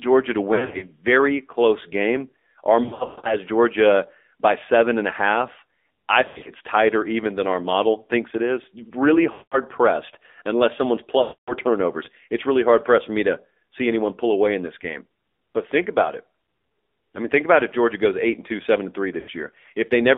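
Throughout the speech, the signal has passed through the AMR narrowband mobile codec at a low rate, consistent with the 7.4 kbps mode. The codec rebuilds the voice from a vocal tract model excited by sparse pulses, so it sounds thin and buzzy, with a plainly audible synthetic edge. The line is band-limited to roughly 250 Hz to 3.7 kHz, so there is no low body and no air above that range.

At 0.54 to 0.87 s, 2.84 to 3.37 s, 6.26 to 6.50 s, 9.32 to 9.59 s, 11.22 to 11.53 s and 19.20 to 19.30 s, lost AMR speech frames occur. Corrupted frames were discarded, and the decoder filled the gaps by repeating the last good pitch and vocal tract settings at falling gain. The first event, ending just before "close game", is spread over about 280 ms and produces short dips and warbles. The longest run of losses in the second event, around 120 ms near 3 s, stretches the sound into a smeared tone that fades almost to nothing before the speech returns rough. 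The 9.32 s gap falls just before "pressed unless someone's", and the final brief dropout comes right after "two seven and three".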